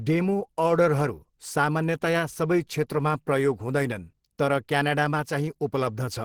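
From start to finish the speech carries plainly audible coding damage: a hoarse, muffled core with rough, grainy noise filling the upper bands, yet content still reaching about 20.2 kHz. This is likely Opus compression in its hybrid mode, with the low band coded as speech and the top filled with band energy, which fits a bitrate near 16 kbps. Unlike MP3 damage, there is less swirling or watery warble from spectral holes, and more graininess.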